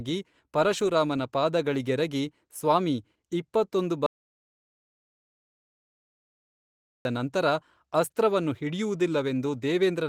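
A lost input, likely a disconnected device or failed link while the recorder kept writing zeros, causes an audio dropout to silence in this speech recording. From 4.06 to 7.05 s, after "ಪರಶುರಾಮನ ಪಾದಗಳಿಗೆರಗಿ ಸ್ವಾಮೀ ಇಪ್ಪತ್ತೊಂದು", the sound falls to complete silence with no room tone for 2.99 s, returning at "ನಂತರ ಅಸ್ತ್ರವನ್ನು". Whatever was said in between is gone.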